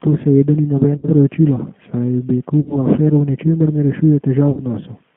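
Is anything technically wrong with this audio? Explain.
Yes. The audio has two problems: a low-rate speech codec throughout, and three brief dropouts that the decoder has papered over.

The entire clip has passed through the G.729 codec, most likely the G.729A variant, and its damage is plainly audible. The band runs only from about 150 Hz to 3.4 kHz, which fits an 8 kbit/s telephone line. The codec rebuilds speech from a vocal-tract filter, a pitch predictor and a few pulses per frame, so the voice comes out rough and faintly synthetic. Simple band-limiting would leave a clean but muffled voice, without that grain.

VoIP packet loss concealed by the speech codec occurs at 0.97 to 1.08 s, just after "seveda ni", then at 2.60 to 2.77 s and 4.51 to 4.61 s. Each gap is about 60 ms, which fits three lost 20 ms packets. The decoder extends the last pitch and filter state and lowers the gain, so the speech smears into a fading buzzy tone or coloured noise. 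Recovery is sluggish afterwards. Plain dropouts would be silent gaps or clicks, not stretched sound.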